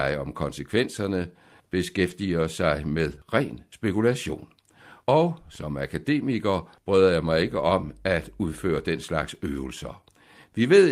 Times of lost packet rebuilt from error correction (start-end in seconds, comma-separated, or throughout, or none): 2.05-2.11, 3.11-3.25